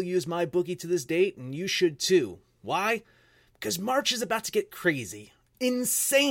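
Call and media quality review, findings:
No audible defects found in the speech recording; nothing to timestamp or attribute to any component.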